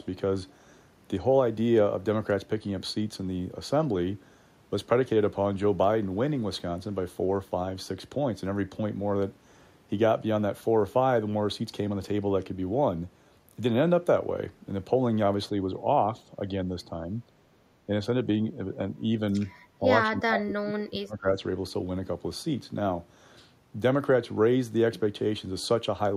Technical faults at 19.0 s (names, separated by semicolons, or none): speech suppressed in double talk